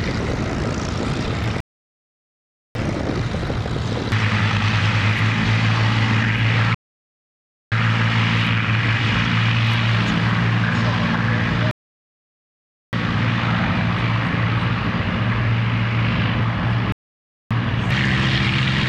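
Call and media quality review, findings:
Rebuffering stall, four events: 1.60–2.75 s (1.15 s), 6.75–7.72 s (0.97 s), 11.71–12.93 s (1.22 s), 16.92–17.51 s (0.58 s). Symptom: hard cut to silence, then playback resumes exactly where it stopped, with nothing skipped and only time added. Probable component: player buffer / delivery path. Mechanism: playback outran downloaded data, so the player halted until more arrived. Roughly 5 s spacing suggests recurring underrun.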